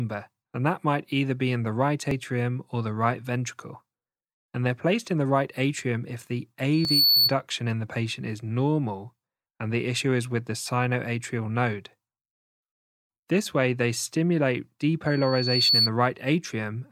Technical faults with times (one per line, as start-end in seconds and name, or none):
2.11 dropped buffer (overrun)
6.73-7.34 loudspeaker feedback squeal
6.85 dropped buffer (overrun)
15.07-15.90 loudspeaker feedback squeal